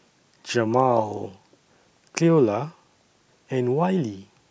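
No technical faults can be heard anywhere in the speech recording.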